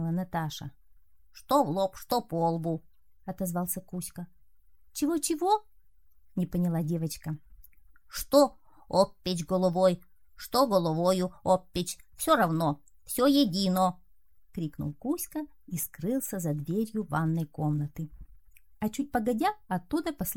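At 15.82 s and again from 18.21 to 18.23 s there are lost LE Audio frames, likely one 10 ms frame and then two in a row. The LC3 decoder fills each gap by replaying the last spectrum with scrambled phase, so tones smear briefly into noise. The light compression does only slight damage.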